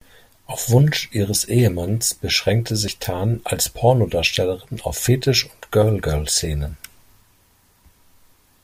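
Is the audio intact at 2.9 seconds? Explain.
No. At 2.88 s the recording program most likely failed to collect its samples before the audio hardware wrote over them, a dropped buffer (overrun). Roughly 40 ms of audio is lost and the two sides are joined directly, with no gap of silence in between. The speech skips ahead abruptly at that point, heard as a sudden jump in the sound.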